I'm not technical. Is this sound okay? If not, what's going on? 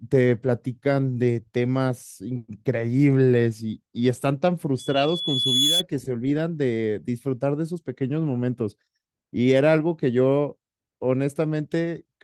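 No. From 4.79 to 5.83 s there is a loudspeaker feedback squeal. A microphone is hearing the loudspeaker it feeds. One high tone, at 3.4 kHz, goes round that loop and keeps growing for about a second. It ends up louder than the speech.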